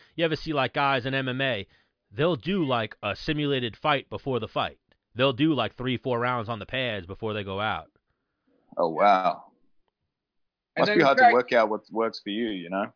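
Nothing stood out on listening to this recording of speech.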